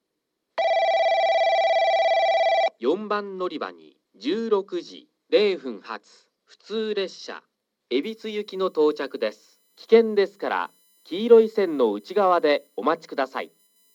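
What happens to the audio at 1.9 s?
Nothing goes wrong at 1.9 s; the audio carries on intact there, with no dropout, click or distortion.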